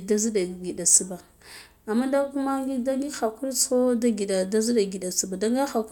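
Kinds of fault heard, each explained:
No audible faults detected.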